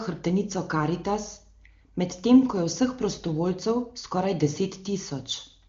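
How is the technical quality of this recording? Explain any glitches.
No glitches: the speech comes through an AMR wideband (HD Voice) path at its top 23.85 kbit/s rate, and the audio band stops at about 7.2 kHz, as that codec's bandwidth dictates.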